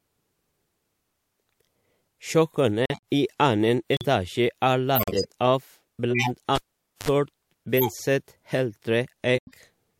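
At 2.86 s the speech drops out abruptly until 2.99 s, just before "i annen", and a second hole follows at 3.93 to 4.05 s, right after "i annen". Longer gaps come at 4.95 to 5.26 s and 9.35 to 9.57 s. These are corrupt frames muted. The decoder rejected damaged compressed frames and the player filled their slots with silence. The lengths point to between two and seven frames each time. Timing holds across every gap. What separates this from a dropout caused by a lost connection is that each hole is clean digital silence with hard edges.

From 6.10 to 6.30 s a burst of corrupted sound cuts through the speech, peaking around -5 dBFS. A weaker one, near -10 dBFS, comes at 7.77 to 7.92 s. These are corrupt frames decoded. The damaged data was played anyway, so misread gains and codes sprayed energy into the wrong frequencies for the length of a few frames. The result is heard as a chirp, squeak, blip or burst of noise, unlike the clean silence of the muted case.

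Between these, at 6.55 s, a pop marks a cable pulled and plugged in. About 0.48 s of near silence follows, then a short 54 ms burst of 50 Hz mains buzz as the plug tip makes contact. A second pop brings the sound back by 7.09 s. The buzz and the paired pops mark it as a physical connection fault, not a codec error.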